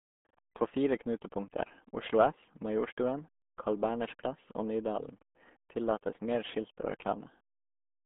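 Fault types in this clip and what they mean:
RealAudio 14.4 codec: The speech sounds muffled and gargly throughout, with a watery, bubbling roughness on every syllable and no air or sibilant sparkle. The sound sits in a narrow telephone-like band of roughly 200 Hz to 3.5 kHz, with nothing at all above 3.8 kHz. That heavy damage fits an old dial-up-era speech coder running at around 8 kbit/s, which keeps only a coarse outline of the voice and discards the detail.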